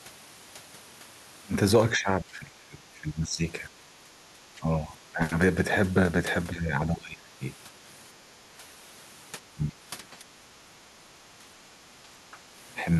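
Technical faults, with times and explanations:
1.98–5.21 s, 6.51–7.41 s, 8.32–8.39 s, 9.53–11.48 s and 12.02–12.4 s: speech suppressed in double talk. The speech drops by about 10 to 20 dB, in parts or in broken pieces. It is deepest in the second and fourth spans. The echo canceller likely could not tell this side's talk from the overlapping far-end echo and turned both down.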